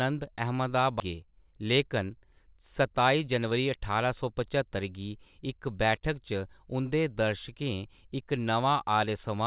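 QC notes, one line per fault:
1.00–1.02 s, skip ahead: The speech jumps forward with no gap at all. Somewhere around 0.7 s of audio never reached playback, either lost in transit or discarded by the jitter buffer when it overflowed while later audio was already queued. The sound on either side of the cut is butted straight together. The listener hears an abrupt splice, with the sentence continuing from a later point as though a chunk had been snipped out.
1.13–3.96 s, jitter buffer speed-up: Just after the jump, the speech runs at about 107% of normal speed, yet its pitch stays put. The jitter buffer was holding more audio than its target, so the receiver trimmed away short slices, one or a few pitch periods at a time, over and over until it had shed roughly a fifth of a second of delay. The result sounds rushed and slightly clipped in rhythm, with the G.711 band limit at 4 kHz still audible beneath it.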